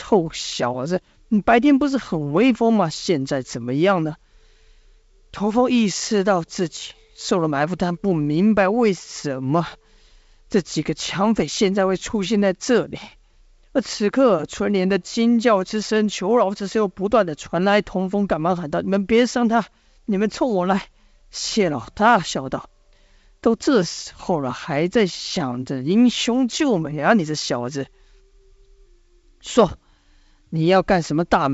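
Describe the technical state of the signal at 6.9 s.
At 6.9 s the speech is intact, with no fault: it passes cleanly through G.722 wideband telephone coding at 64 kbit/s, with little or no audible coding damage and content ending around 7.7 kHz.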